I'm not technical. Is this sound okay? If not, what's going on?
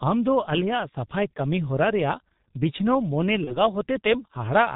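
No. The call was squeezed through the G.723.1 codec, an old internet-phone method that keeps very little detail and drops everything above 4 kHz. The whole recording sounds muffled and hoarse, and consonants come out smeared.

Around 3.44 s, a bit of data went missing in transit, which fits one lost 30 ms packet. The VoIP packet loss was concealed by the speech codec: it guessed the gap from the preceding sound, leaving a brief fading patch that stays rough until about 3.57 s.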